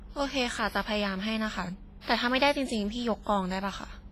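Throughout the speech, the sound is smeared and washy, with a ringing quality and a hiss that rises and falls with the signal, and nothing is present above 15.5 kHz. The damage is heavy and points to WMA compression at a low bitrate, likely around 24 kbps. This transform codec quantises in long blocks, so its noise spreads over tens of milliseconds around each sound, while weak spectral detail is discarded.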